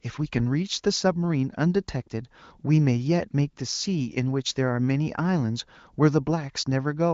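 There are no technical faults to describe at any point in this speech, which is carried over an AMR wideband (HD Voice) codec at 23.05 kbit/s with nothing above 7.5 kHz.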